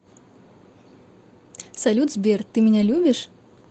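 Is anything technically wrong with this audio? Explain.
Yes. The speech shows lost packets rebuilt from error correction, at 1.75 to 1.77 s and again at 2.81 to 2.95 s. The second rebuilds about 80 ms in total, which fits four separate 20 ms packets. Each missing packet was replaced by a low-bitrate copy carried in the following packet, so there is no gap, but those stretches sound rougher and noisier. On a spectrogram they appear as short, smeared, noisier patches. The waveform stays continuous, with no dropout. The call audio shows the Opus ceiling at 8 kHz.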